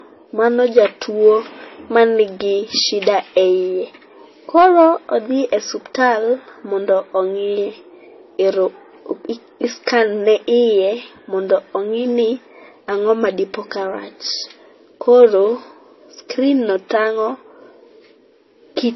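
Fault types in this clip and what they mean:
Transcoding between lossy codecs: the speech has nothing above 5.8 kHz and carries two kinds of smeary, swirly artefacts at once. That points to a low-bitrate MP3, likely re-encoded to AAC, with the second encoder spending bits on the first one's damage.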